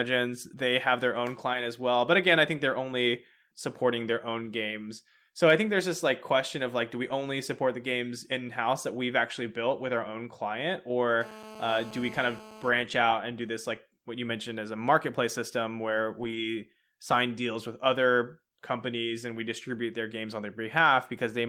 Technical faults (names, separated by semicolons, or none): lost packet rebuilt from error correction; GSM phone buzz; GSM signalling bursts